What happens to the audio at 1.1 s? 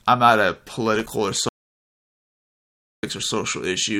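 Loose connector crackle runs from 0.95 to 1.13 s, just after "I'm not a". A worn contact makes and breaks the signal, chopping the speech into irregular scratchy bursts.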